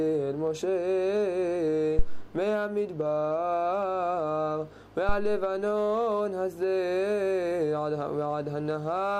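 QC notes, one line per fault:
1.99–2.33 s and 5.09–5.56 s, phantom power thump: a deep low thud peaking at about -9 dBFS, then a softer one at about -14 dBFS, dying away in roughly 77 and 107 ms. Switching the supply on or off on the live input sends a DC step through the coupling capacitors.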